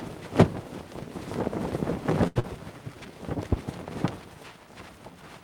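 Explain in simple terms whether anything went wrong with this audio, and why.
Short stall from a late packet, at 2.27 to 2.38 s: a piece of the audio arrived late, so the player held the last sound for about 81 ms while it waited. Nothing is lost, but that sound drags on a little too long.

Short concealed packet loss, at 2.40 to 2.45 s: about 80 ms of audio never arrived in time. The player covered the gap with a 40 ms guess based on the preceding sound, so a brief smear replaces what was lost. The audio also jumps ahead by roughly 40 ms.

Jitter buffer slow-down, at 2.72 to 3.12 s: the player needed to rebuild its safety reserve. It repeated tiny slices of sound, adding 58 ms, so this stretch plays at about 87% speed. It sounds slightly drawn out at the same pitch.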